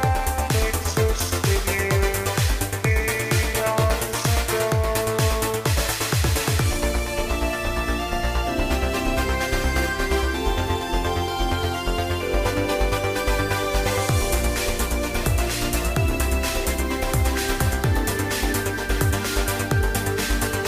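No technical faults are audible.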